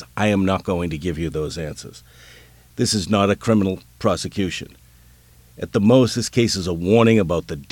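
Low bit depth with dither runs throughout: an even hiss roughly 35 dB below the speech, consistent with 9-bit audio, with none of the gritty distortion undithered rounding leaves.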